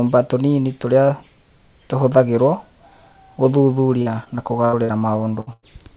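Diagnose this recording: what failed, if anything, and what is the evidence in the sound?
Network packet loss, handled by call processing. From 4.02 to 5.03 s the speech turns choppy and robotic. This is repeated packet loss: six gaps, the longest 74 ms, concealing about a fifth of the stretch. Each hole was filled by extending the previous sound, then another followed.

Two separate bursts of packet loss come next, at 5.41 to 5.49 s and 5.53 to 5.65 s. About 60 ms and 100 ms of speech are lost. The receiver held the last sound and faded it, giving a brief buzz or hiss. Speech then resumes further on, with the middle gone.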